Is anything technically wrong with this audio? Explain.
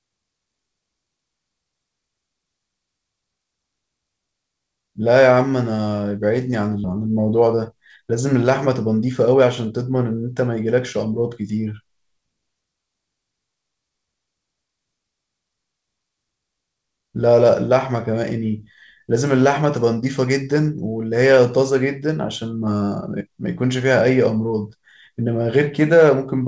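Yes, there are two related faults close together at 6.84 s, heard through a call-codec path whose band stops at 8 kHz, which fits wideband G.722.

At 6.84 s there is a skip ahead. Roughly 0.4 s of speech never reaches playback, discarded in transit or flushed when the jitter buffer overflowed while later audio was already queued. The two sides join almost seamlessly, with no silence or filler in between, so the speech simply lurches forward. A dropout would leave a gap or a concealment smear, and a time-stretch would keep every syllable.

From 6.93 to 9.35 s comes a jitter buffer speed-up. The buffer is still holding more audio than its target, so the receiver trims tiny slices of one or a few pitch periods again and again, removing around a fifth of a second in total. Speech runs at about 108% speed and sounds briefly rushed, yet pitch stays where it was. That unchanged pitch separates this from a resampling or clock error, which would raise the pitch along with the speed.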